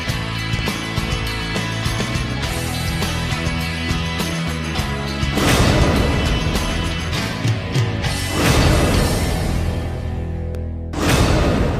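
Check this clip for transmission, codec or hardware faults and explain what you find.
Periodic USB or driver dropouts run from 0.59 s to 10.55 s, recurring every 2.0 s, around seven in all. At each one, roughly a millisecond of audio is replaced by silence as a background task stalls the bus or driver, leaving evenly spaced ticks wherever signal is present.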